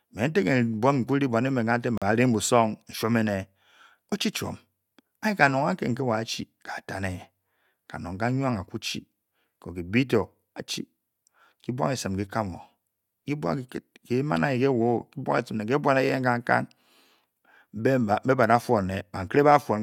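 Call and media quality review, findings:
Speech cuts to silence for 41 ms at 1.98 s, just after "emen katak", then resumes. Likely Bluetooth stall: delayed packets let the headphone buffer run dry until resends arrived.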